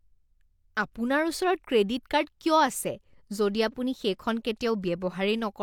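A recording of speech, with no technical fault anywhere in it. There is nothing here that needs a time or a cause.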